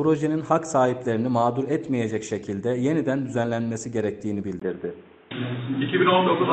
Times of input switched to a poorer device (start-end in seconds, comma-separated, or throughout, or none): 4.59-6.53